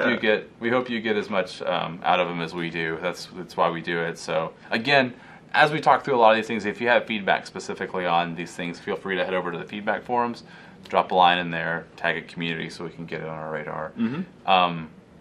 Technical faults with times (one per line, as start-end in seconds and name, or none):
none